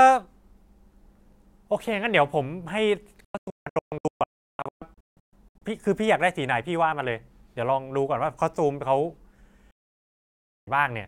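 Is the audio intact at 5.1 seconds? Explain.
No. A digital broadcast dropout runs from 3.24 to 5.62 s, and 5.1 s falls inside it. The receiver stopped getting usable frames, through signal loss or failed checksums, and muted until valid data returned. The speech drops out in a string of short holes, each cut with a fade of about 3 ms. They total 1.66 s of silence across 2.37 s, with the longest gap 352 ms. Whatever was broadcast during those holes is gone.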